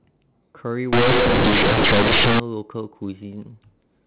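A-law bytes from the G.711 telephone stream are being played as plain linear 8-bit samples, with no expansion, from 0.93 to 2.40 s, so companded audio is read as linear. Every sign change throws the waveform across half its range, and speech becomes harsh, buzzy, overloud distortion with noise filling the gaps.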